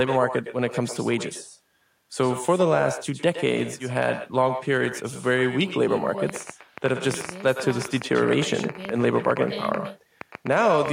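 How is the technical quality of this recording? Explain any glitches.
Not great: there are two separate problems, one running the whole way through and one in the back half.

Echo with no canceller, throughout: every phrase comes back about a tenth of a second later, around 11 dB quieter and thin. The far end's loudspeaker is feeding its mic, and nothing is cancelling that return path.

Train of clicks, from 6.30 s to 10.89 s: around forty sharp ticks at roughly 7.9 per second, spaced unevenly. They peak at about 10 dB over the speech and carry on through the pauses too. The cause is likely electrical interference or a faulty connection or power supply.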